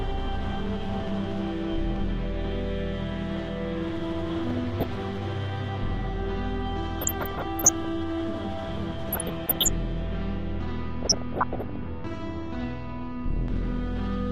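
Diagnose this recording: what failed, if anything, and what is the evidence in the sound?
DAB burbling, at the reception and MP2 decode stage. Short blips of noise and sub-band level jumps sit over the audio at 4.47–4.96, 6.98–7.85, 9.09–9.68 and 11.03–11.76 s. A weak signal lets bit errors, around half a percent, slip past error correction, so corrupted scale factors make single sub-bands jump for up to a frame.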